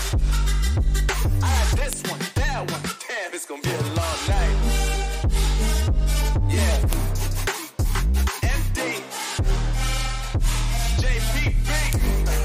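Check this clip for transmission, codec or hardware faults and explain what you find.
There's one fault here, repeating: a file header played as audio, at 1.93, 6.93 and 11.93 s. The 5 s spacing suggests pieces joined without stripping headers, so those bytes play as samples, giving a sharp, loud click each time regardless of the surrounding sound.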